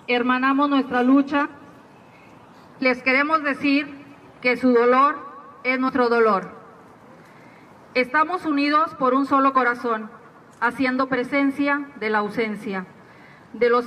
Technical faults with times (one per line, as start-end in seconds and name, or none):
1.44-1.46 compressed frames skipped
2.81 compressed frames skipped
5.88 compressed frames skipped